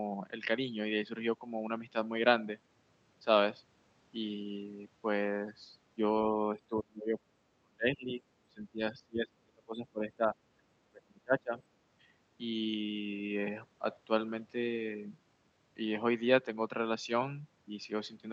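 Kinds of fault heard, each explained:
Speech suppressed in double talk: the voice sinks in dips of up to about 35 dB, likely from echo-canceller ducking.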